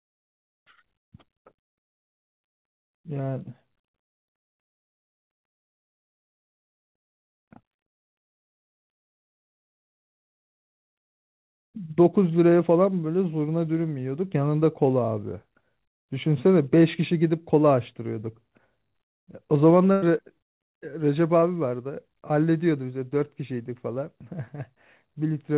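At 19.92 to 20.04 s, a burst of packet loss dropped about 100 ms of the call; the receiver extended the last sound and faded it, leaving a held, dimming tail before speech resumes further on. At 21.40 to 21.44 s, a short concealed packet loss left 20 ms unfilled by real audio, and the patched-in continuation is heard as a brief smear. Throughout, the narrow telephone band with nothing above 4 kHz fits a G.711 mu-law call path.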